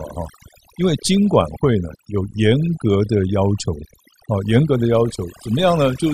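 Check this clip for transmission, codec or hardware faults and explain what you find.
One fault is present, running through the whole clip: overdone noise removal. A noise reduction stage set far too aggressively is gating individual frequency bands down or out whenever their level sits close to its noise estimate. The quieter components of the speech fall under that threshold and are removed along with the noise. The background drops and breaks up into scattered twinkling, warbling specks of residue.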